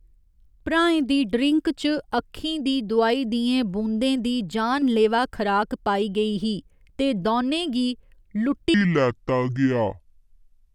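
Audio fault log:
8.74–10.75 s: section at the wrong speed. From 8.74 s to the end, the speech plays at 0.63 times its proper rate, so it turns slow and deep together, dropping roughly seven semitones. Pitch and tempo fall by the same ratio, which likely comes from this stretch being run against the wrong clock. A pitch-shift fault would lower the voice while keeping its pace, and a time-stretch would slow it without the drop in pitch.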